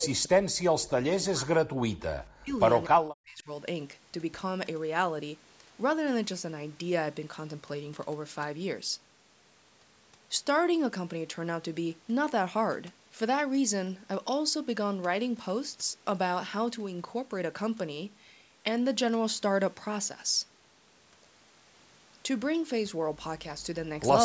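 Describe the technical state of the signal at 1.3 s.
At 1.3 s the speech is being pushed down, dipping by a very deep amount within the span from 0.0 to 1.95 s. This is likely speech suppressed in double talk: with both sides talking at once, the echo canceller turned down the talker along with the echo.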